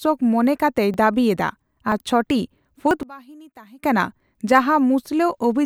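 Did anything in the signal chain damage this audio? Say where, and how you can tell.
Yes. Jumps at 0.94, 1.92 and 2.91 s skip the speech ahead by a few tens of milliseconds. This is likely a dropped buffer (overrun) at the driver stage.

From 3.03 to 3.83 s the speech drops by about 24 dB. Likely cause: one channel inverted in the wiring, so the shared content cancels when summed to mono.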